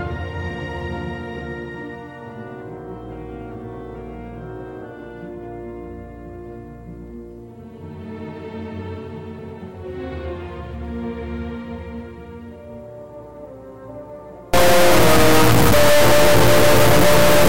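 From 14.54 s to the end, integer read as float: 32-bit integer samples decoded as float become huge or near-zero values, giving an extremely loud, harsh square buzz, unlike ordinary clipping.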